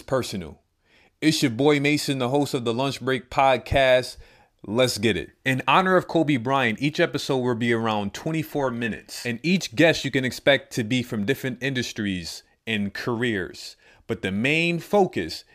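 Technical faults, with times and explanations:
No technical faults can be heard in this speech recording; the signal stays steady and continuous throughout.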